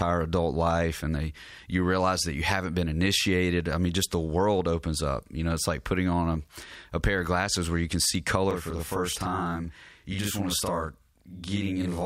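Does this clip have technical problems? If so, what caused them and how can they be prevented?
Yes. Channel delay (doubling) appears from 8.51 s, just after "where you can see", and runs to the end of the clip. One channel arrives about 40 ms late, and when the two are summed to mono the late copy sits at the same level as the original, so the speech takes on a doubled, slapback quality. A 40 ms offset fits a single long buffer inserted in one channel's path. Prevention: keep both channels on shared, aligned buffering and verify sync before any mono fold-down.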